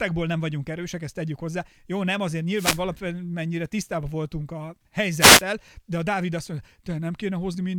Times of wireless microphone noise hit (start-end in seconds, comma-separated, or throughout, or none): 2.53-2.82, 5.18-5.43